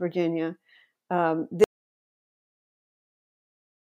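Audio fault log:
1.64 s to the end: audio dropout to silence. The speech cuts off abruptly mid-flow and never returns, and the remaining stretch is dead digital silence with no room tone or noise floor. The likely cause is a lost input, such as a disconnected device, a failed link or a mute, while recording carried on writing silence. On the waveform the trace collapses to a flat line; the spectrogram shows a hard vertical edge followed by a completely blank field.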